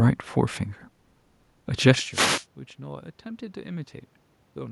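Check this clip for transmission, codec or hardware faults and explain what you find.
One fault turns up: a wireless microphone noise hit from 2.10 to 2.47 s. For a little over a third of a second a rushing swish of static rises over the speech and then clears. The cause is the radio link of an analogue FM microphone: reflected copies of the signal cancel the direct one, the carrier fades, and the receiver's own noise surges up to fill the gap. Just before it, around 2 s, the level shifts as the talker moves, and steady room noise runs beneath throughout. Neither is a system fault.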